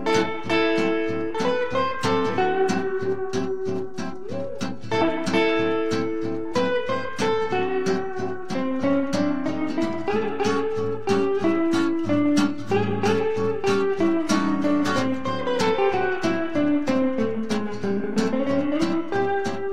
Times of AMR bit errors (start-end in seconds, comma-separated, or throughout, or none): none